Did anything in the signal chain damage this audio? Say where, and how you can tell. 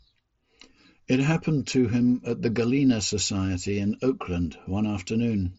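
No, nothing in the chain damaged this speech. It came over a Bluetooth mSBC headset link, which shows in the band stopping near 7.7 kHz and a faint grain on the louder sounds, both normal for that wideband headset codec.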